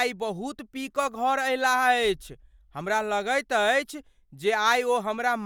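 Nothing stood out on listening to this speech recording.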